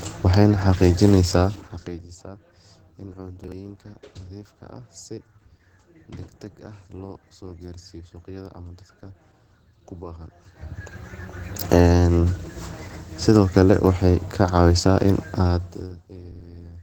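Speech throughout carries a hoarse, grainy, muffled texture, likely from Opus compression at around 16 kbps in its hybrid speech mode, though the band still reaches about 20 kHz. From 1.3 to 2.18 s, a fast ticking zipper noise rides on the sound as the level falls by roughly 20 dB in coarse steps, about fifty per second, with no smoothing between them. At 3.44 to 3.52 s a brief garbled moment comes from chunks out of order: a 40 ms chunk plays one chunk late, leaving three hard joins.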